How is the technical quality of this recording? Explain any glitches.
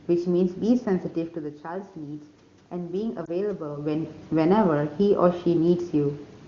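The recording has two glitches: a slow level rise and one short dropout.

Automatic gain rising, from 0.67 to 4.2 s. When the talker moved around 1.0 s, the level at the microphone fell by about 10 dB. The automatic gain control responded by raising its gain step by step, by about 5 dB over roughly three and a half seconds. The speech and the room noise swell together. The boost is smaller than the drop.

Lost AMR speech frames, at 3.25 to 3.29 s. A radio error corrupted a piece of the transmission. The decoder filled the gap by repeating the last good pitch and vocal tract settings at a lower gain. The dip is short enough to fit a single lost 20 ms frame. You hear a brief dip or warble in the speech, and then the speech comes back weak or rough for a moment. The wideband coding itself leaves no more than faint traces.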